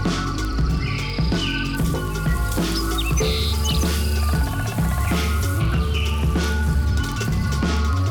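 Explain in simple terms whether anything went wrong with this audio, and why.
Word clock ticks sound from 0.12 s to 8.09 s: about a hundred sharp ticks, evenly spaced roughly every 0.07 seconds. That steady rhythm, unlike random clicks, comes from two unsynchronised digital clocks.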